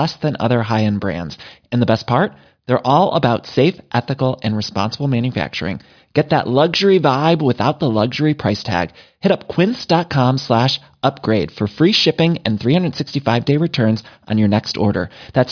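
No technical faults can be heard anywhere in the recording, and the signal stays steady and intact throughout.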